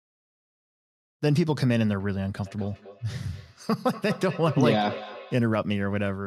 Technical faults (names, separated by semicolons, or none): feedback echo between two devices